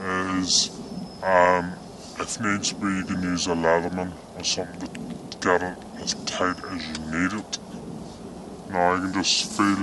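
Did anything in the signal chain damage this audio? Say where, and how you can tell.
Yes. Throughout the clip the audio runs slow and low together, at about 0.73 times normal speed and about 5.5 semitones down. That is a wrong sample rate at playback: the ratio fits 44.1 kHz material clocked out at 32 kHz with no conversion.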